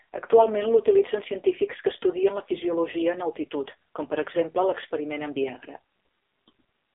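From start to finish the speech carries AMR narrowband mobile codec damage: nothing above 3.8 kHz, a line band of roughly 300 Hz to 3.6 kHz, and heavy buzzy, synthetic coloration that points to a low mode near 6 kbps. Unlike simple telephone filtering, the vocal-tract model and sparse pulse excitation audibly rebuild the voice.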